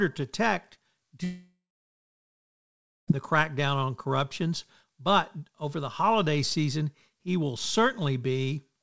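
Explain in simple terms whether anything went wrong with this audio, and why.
Long network dropout, 1.24 to 3.10 s: after "to detect," a brief fading buzz turns to silence, likely from lost data, until "the crackdown on corruptions."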